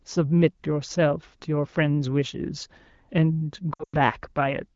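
A speech clip coded with AMR wideband has lost AMR speech frames from 3.73 to 3.97 s. About 160 ms of sound goes missing across that 200 ms span, which fits eight lost 20 ms frames. The decoder holds the last good pitch and vocal tract settings, so the sound smears, then fades. The longest gap is 100 ms, and the wideband decoder mutes quickly. The speech returns weak and rough for a moment.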